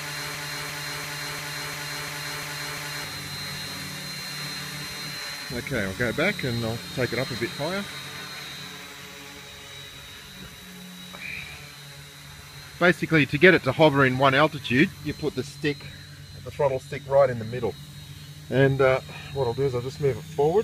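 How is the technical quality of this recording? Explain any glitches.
The recording opens with a broken-record loop running from the very start to about 3.04 s. The playback or streaming chain likely stalled and kept resending the last fragment it held, a piece about 347 ms long. That fragment repeats eight times back to back, so the opening three seconds stutter in an exact, mechanical cycle. Whatever audio belonged in that span is gone, and the sound jumps forward when the loop breaks.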